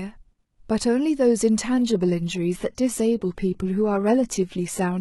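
From 1.78 s to the end, the speech falls back to an adaptive stream at a lower bitrate. The switch is sudden, with no gap. Treble thins and turns synthetic, and codec artefacts rise. This points to a drop from about 96 kbit/s to 16 kbit/s.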